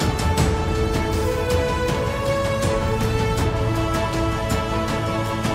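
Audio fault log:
No faults detected; the audio runs without any audible defect.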